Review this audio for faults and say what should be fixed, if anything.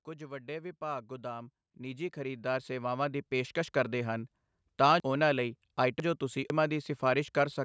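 From 0.18 to 4.37 s the speech and the background swell together, climbing by about 15 dB. This is automatic gain rising: the gain control judged the input too quiet and slowly raised its gain, lifting everything at once. Setting a fixed input level, or letting the gain control settle before recording, would prevent it.

Between 5.0 and 6.5 s the speech turns jumbled. These are chunks out of order. A half-second chunk arrived two chunks late and plays after the chunks that should follow it. Nothing is missing, but the sequence is wrong, leaving three hard joins. Reordering chunks by sequence number or timestamp before playback or writing would prevent it.

The band stops at 8 kHz, as expected from call microphone processing.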